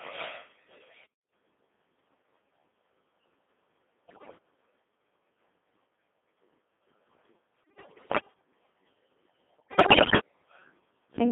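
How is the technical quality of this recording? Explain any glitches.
The technical quality is poor. The whole clip is speech passed through a very low-rate digital radio vocoder, and four short bursts of transmission errors break it up further.

Throughout, the Codec 2 vocoder at 2.4 kbit/s shapes every sound. It does not carry the waveform. It sends only pitch, voicing, level and a rough spectral envelope, and the decoder rebuilds the speech from sine waves. The damage is heavy. The speech sounds robotic and buzzy, and the band is confined to roughly 200 Hz to 3.6 kHz.

Bit errors on digital voice radio hit at 1.03 to 1.29 s, 4.08 to 4.38 s, 7.64 to 8.34 s and 9.58 to 10.20 s. The error rates are high, around one bit in ten, worse in the second and fourth bursts. At this bitrate each bit helps set a whole frame's pitch, level or tone colour. So the synthetic speech lurches in pitch and loudness. 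It dissolves into bleeps, warbles and garbled robotic noise. The longer third and fourth bursts hit the most frames.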